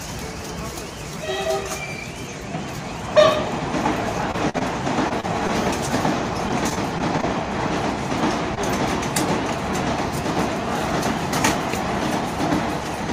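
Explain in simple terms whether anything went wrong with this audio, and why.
Yes, a few things went wrong. All of them come from bits of the audio getting lost on the way.

The first is repeated packet loss (robotic sound), from 4.31 to 4.63 s and again from 6.49 to 7.25 s. Small pieces kept going missing, one after another. Each time, the receiver covered the hole by stretching out the sound just before it. In the first stretch there are four holes close together, and about a third of it is patched. That makes it choppy. The second stretch has six smaller holes and sounds lighter but still rough.

The second is short concealed packet loss, at 5.09 to 5.12 s, 5.20 to 5.25 s, 5.47 to 5.51 s and 8.55 to 8.59 s. Each time, a tiny piece went missing and was filled in and blended back. You hear a quick smear or wobble, and a very short sound can disappear.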